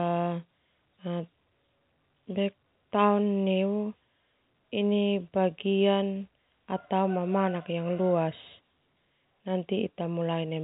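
The speech shows no technical faults, and its telephone-band character, with nothing above about 3.8 kHz, is what G.711 telephone coding normally produces.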